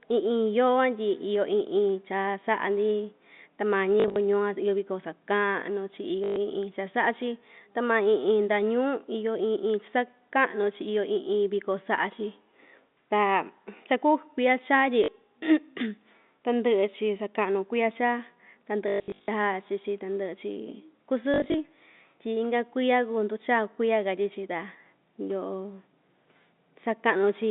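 Packet loss with last packet repeated occurs at 4.0–4.16, 6.24–6.36, 15.04–15.08, 18.88–19.28 and 21.34–21.54 s. Each gap is filled by replaying the previous chunk. The repeated runs buzz near 50 Hz, which fits 20 ms packets. The longest, at 18.88 s, spans 0.4 s with 320 ms lost.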